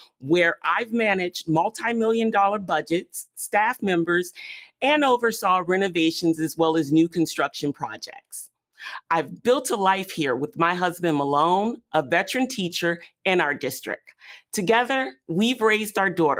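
A noise suppressor built for speech has been left on across this audio, and it treats steady material as noise. Throughout the clip, held tones, ambience and decaying tails are pulled down while sharper onsets pass, so the level breathes by roughly 5 dB and the sound pumps and thins. Unlike a compressor, which ducks on loud peaks, this gain loss tracks how steady a sound is, not how loud it is, and attacks stay intact while sustains sink beneath them. On top of that constant behaviour, the suppressor cuts two passages much harder, each by about 20 dB at its deepest. The first runs from 0.0 to 0.25 s and is affected for a bit over a tenth of a second. The second runs from 7.74 to 8.48 s and is affected for around half a second. In both, the steady or fading sound sinks sharply or has its decay cut short, while any sudden element still comes through. That survival of transients separates these cuts from a dropout or a gate closing, which would silence everything together.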